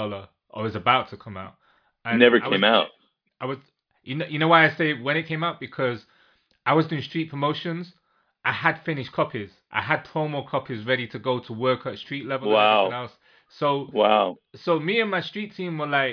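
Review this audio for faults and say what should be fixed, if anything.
Nothing in the recording needs fixing. No faults can be heard anywhere in the speech, so there is nothing to prevent.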